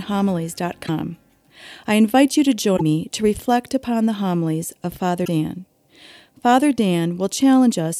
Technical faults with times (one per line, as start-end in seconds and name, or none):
0.85-0.89 broken MP3 bit reservoir
2.76-2.81 broken MP3 bit reservoir
5.24-5.28 broken MP3 bit reservoir